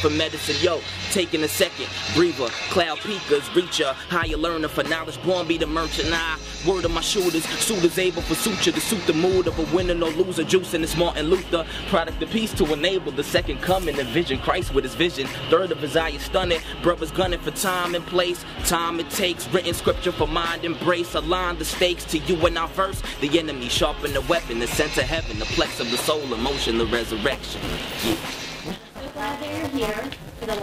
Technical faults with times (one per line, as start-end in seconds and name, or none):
27.32-30.63 buffer tearing